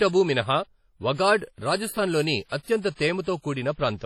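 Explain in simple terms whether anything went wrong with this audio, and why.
The speech sounds washy and ringing throughout, with a hiss that swells and fades along with the voice and no sound above 16.1 kHz. This is likely WMA compression at a heavy setting, which blurs the noise over time and discards the quietest detail.

Just after "రాజస్థాన్ లోని", from 2.49 to 2.52 s, a brief hiss of about 32 ms comes before a sharp onset, softening it. This is pre-echo: the codec spreads noise across a block, so it leaks into the quiet moment ahead.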